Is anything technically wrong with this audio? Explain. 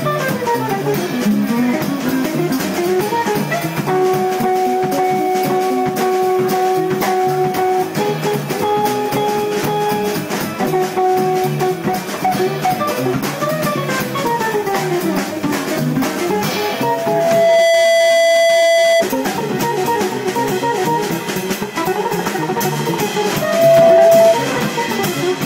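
Yes, there is loudspeaker feedback squeal. From 16.60 to 19.06 s a steady 666 Hz tone swells over about a second to a little above the programme level. From 23.33 to 24.39 s it returns faster and louder, roughly 10 dB above. A microphone is picking up its own loudspeaker, and the loop gain at 666 Hz exceeds one.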